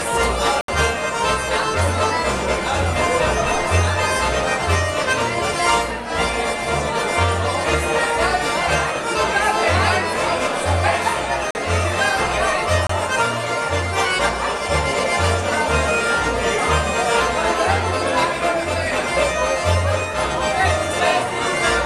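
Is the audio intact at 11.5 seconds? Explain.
No. At 11.51 s the audio drops into a block of digital silence lasting about 43 ms, until 11.55 s. That length fits a 2048-sample block at 48 kHz being output as zeros instead of audio, the pattern of a buffer not filled in time. The signal cuts to zero and returns with no fade. At this length it is heard as a short hole in the sound.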